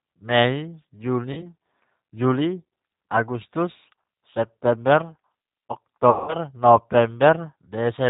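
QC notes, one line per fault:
Throughout: G.729 codec. The speech is band-limited with nothing above 4 kHz, and the coding damage is plainly audible as a rough, slightly synthetic texture. That fits an 8 kbit/s G.729A stream. Each 10 ms frame is rebuilt from a vocal tract filter, a pitch predictor and a sparse set of excitation pulses rather than the actual waveform.
1.33 to 1.48 s and 6.10 to 6.35 s: VoIP packet loss concealed by the speech codec. In the first gap, about 40 ms of audio is missing. The second is longer, about 180 ms. Each time the decoder keeps repeating its last pitch and filter with falling gain, so the speech smears into a buzzy tone or coloured noise that fades, instead of going silent. Because every frame builds on the previous one, the speech stays weak or distorted briefly after packets resume.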